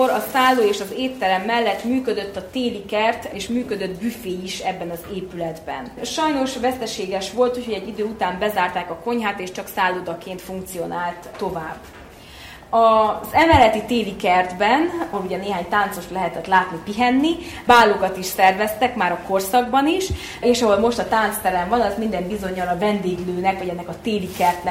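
No technical faults are audible.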